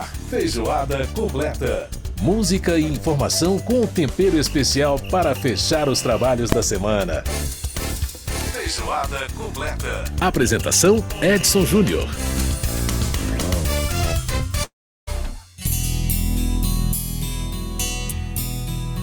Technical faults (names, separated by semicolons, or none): invalid numbers at full scale; long network dropout